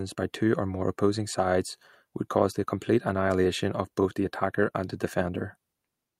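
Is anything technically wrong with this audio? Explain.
Yes. Clock drift between sender and receiver runs throughout: the sender's clock is about 4 percent fast, so the receiver's buffer keeps overfilling, giving a faintly unsteady pace and small discontinuities in the waveform. Repeated timing corrections from 0.15 to 6.19 s trim short pieces to hold 104 percent speed, heard as slight hiccups and seen as unevenly spaced seams in the spectrogram.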